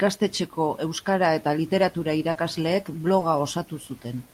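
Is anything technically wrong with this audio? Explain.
Yes. Around 2.31 to 2.37 s, and again around 3.19 to 3.23 s, the speech briefly smears, with a short wobble where the sound should run cleanly. This is short concealed packet loss: about 40 ms of audio at the first point and 20 ms at the second never arrived in time, so the receiver extended the preceding sound to bridge each gap before fading back into the real signal.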